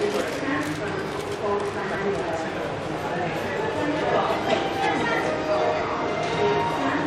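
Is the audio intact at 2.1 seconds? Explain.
Yes, at 2.1 seconds the audio is intact, with no dropout, click, distortion or other fault audible at that moment.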